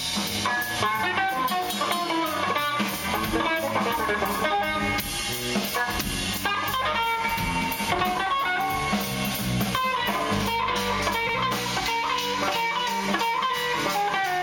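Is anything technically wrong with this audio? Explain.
Yes. At about 11.29 to 11.37 s there are repeated frames: a block of about 78 ms is played once and then immediately played again, because a short run of compressed frames was written or sent twice and the decoder simply plays it a second time. The block length fits a run of three codec frames. It sounds like a brief stutter. Unlike a dropout or an echo, nothing goes missing and nothing fades: the same fragment recurs exactly, and the clip runs 78.4 ms longer.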